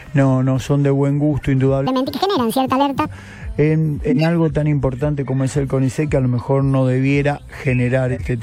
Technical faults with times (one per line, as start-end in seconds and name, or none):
1.87-3.06 section at the wrong speed
4.10-4.27 corrupt frame decoded
8.09-8.23 corrupt frame decoded